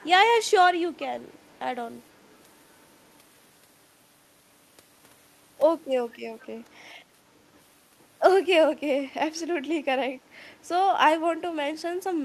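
At 0.95–1.02 s and 6.41–6.45 s, brief faint echo leak returns speech 482 ms late, likely from a loudspeaker-side echo canceller passing residual pickup.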